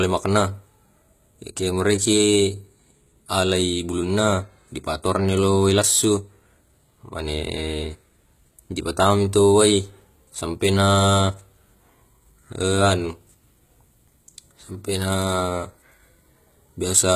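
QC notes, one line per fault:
Throughout: HE-AAC compression, plainly audible. The treble sounds synthetic. S sounds come out gritty and metallic, with a lispy edge. Nothing is present above about 14.9 kHz. The likely cause is HE-AAC coding at a rate that fits roughly 20 kbps. Only the lower spectrum of the speech is coded. The highs are rebuilt by copying lower bands upward under a coarse envelope, so their harmonics no longer match the real ones.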